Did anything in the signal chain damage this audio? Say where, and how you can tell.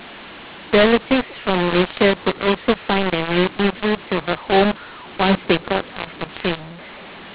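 Yes. The speech sounds harsh and gritty throughout, with levels scrambled and pauses filled with noise instead of silence. That is mu-law and A-law mixed up at the codec stage: telephone audio written as A-law was decoded as mu-law, so every 8-bit code maps to the wrong amplitude.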